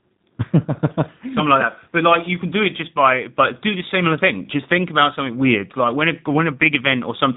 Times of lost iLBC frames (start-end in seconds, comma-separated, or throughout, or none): none